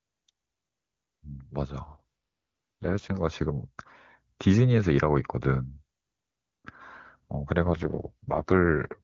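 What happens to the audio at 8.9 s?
The speech turns rough, raspy and synthetic without any gap. This is an AMR rate drop from 7.64 to 9.01 s, which fits a fall from 23.85 to 6.6 kbit/s.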